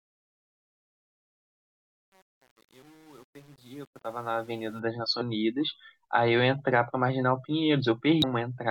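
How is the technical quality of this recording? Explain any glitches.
The recording has two kinds of fault: a gritty fade-in at the start and three brief decoder blips.

Truncation distortion on a fade runs from 0 to 4.79 s and is worst up to about 4.5 s. The fade-in, itself smooth in shape, passes through a stage holding only 8 bits with no dither. At low levels the waveform collapses into coarse steps, so the quiet opening sounds grainy. It is a grit tied to level, not a steady hiss.

Damaged data in a compressed stream appears at 2.81 s, 5.20 s and 8.22 s. Corrupted bytes make the decoder misread a frame and resynchronise at the next header, producing a short chirp, squawk, click or hole. Each one is isolated and unrelated to level, unlike the fade's distortion.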